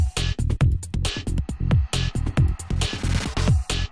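No technical fault can be heard anywhere in this audio. Nothing in the signal points to a problem in how it was captured, processed or delivered.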